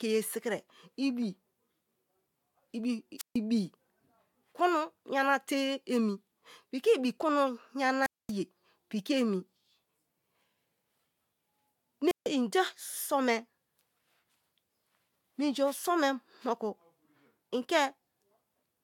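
Radio signal from an analogue FM microphone fades three times, and each time the receiver's squelch shuts the output. That is a wireless microphone squelch dropout: hiss or static swells, then the speech falls into near silence before returning. It happens from 3.18 to 3.37 s with a mute of 145 ms, from 8.02 to 8.32 s with 231 ms of silence just before "ye piki emi", and from 12.07 to 12.28 s with a 149 ms mute.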